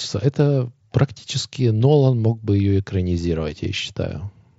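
Nothing goes wrong in this one: the speech arrives over a Bluetooth mSBC headset link that's doing its job as normal, and there's no technical fault anywhere to point to.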